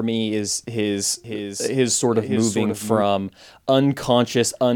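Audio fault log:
1.24–3.02 s, doubled audio track: just after "me is his", a second full-band copy of the speech runs about half a second behind and about 5 dB quieter, likely from a slower capture path. Unlike an echo, it has no decay or room colour, and it starts and stops abruptly.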